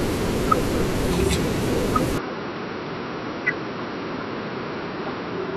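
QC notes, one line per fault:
2.18–5.56 s, input switched to a poorer device: at 2.18 s the speech abruptly turns duller and slightly quieter, falling by roughly 5 dB, with no gap at the changeover. From there to the end of the clip nothing is present above 5.7 kHz, and a new background noise sits roughly 30 dB under the voice. The sudden band limit, the level shift and the new noise floor together likely mean the recording moved mid-take to a lower-quality microphone or a headset call profile.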